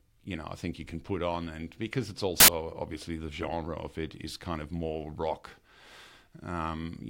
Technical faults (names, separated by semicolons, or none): samples built from the wrong bytes